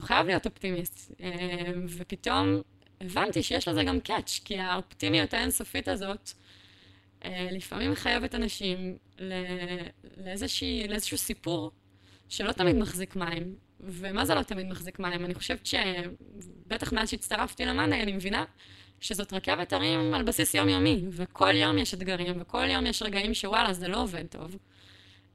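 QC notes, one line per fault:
Throughout, overlap-add ripple: the speech sounds metallic and robotic, with a buzz at around 200 Hz. The frames were windowed and rejoined with an overlap that doesn't sum flat, so the level swings by about 60 dB with every frame.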